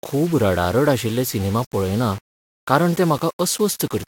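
Speech with grainy distortion that tracks the signal throughout: quiet stretches turn gritty and the softest sounds sputter or vanish. The likely cause is low bit depth without dither, fitting 6-bit rounding with error around 20 dB below the speech. Waveforms show stair-stepped levels, and spectrograms show broadband hash following the speech.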